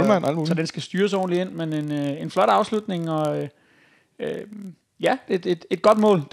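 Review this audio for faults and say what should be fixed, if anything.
Throughout the clip, a filter restarted on every block drops its stored state at each block boundary and starts from zero, leaving a small transient about every 23 ms. Together these form a 43.1 Hz buzz, consistent with 1024-sample blocks, that follows the speech level. To prevent it, carry the filter's state over from one block to the next instead of resetting it.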